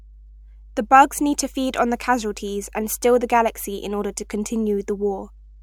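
Mains hum runs from start to finish: a steady low tone at 50 Hz sits under the speech, roughly 25 dB below it. Power-line current has leaked into the signal path through a ground loop or a nearby transformer, leaving a constant drone with some low harmonics.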